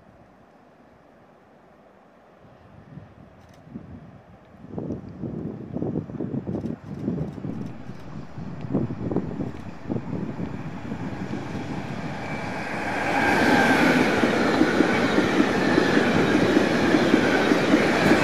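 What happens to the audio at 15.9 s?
At 15.9 s you're sitting inside a DC step that started at 7.50 s and holds right through to the end of the clip. The waveform's zero line jumped to an offset of about -40 dBFS there and never came back, which is what you'd get if a converter recalibrated or an offset input got switched in. The audible part was a low thump or click at 7.50 s; by 15.9 s the offset just sits there, silently shifted.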